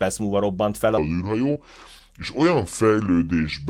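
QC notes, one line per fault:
0.98–3.69 s, section at the wrong speed: from just under one second to the end, the audio runs at 0.735 times its original rate, so pitch and tempo drop together by about five semitones. Speech turns noticeably deeper and drawn out, with formants shifted down along with the fundamental, so the voice character changes rather than just the pitch. The abrupt onset at 0.98 s points to a segment likely replayed against the wrong clock.
1.53–1.57 s, short concealed packet loss: inside the slowed section, about 20 ms of audio failed to reach the decoder in time, and the receiver covered it with 20 ms of synthesized fill before crossfading back into the real signal. The fill extends the preceding sound, following its pitch if voiced or as shaped noise if not, so the gap is heard as a brief smear or wobble rather than a silence, and a short consonant at that point may be lost.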